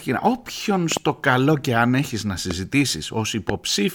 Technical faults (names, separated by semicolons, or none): loud pop